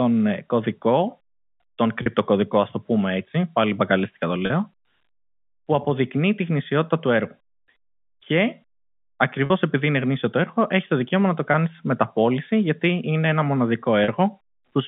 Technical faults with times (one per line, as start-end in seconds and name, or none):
2.02-2.06 packet loss with pitch repetition
4.46-4.50 packet loss with pitch repetition
9.46-9.50 packet loss with pitch repetition
11.52-11.54 packet loss with pitch repetition
14.04-14.08 packet loss with pitch repetition